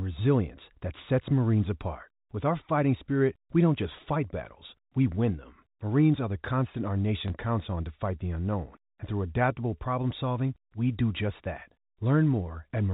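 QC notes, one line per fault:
7.28 s, packet loss with last packet repeated: a single 20 ms gap, consistent with one lost 20 ms packet, is filled by replaying the preceding chunk of speech, which sounds like a small blip. On the waveform, one short segment duplicates its neighbour. The spectrogram shows speech within the G.711 band, which stops at 4 kHz.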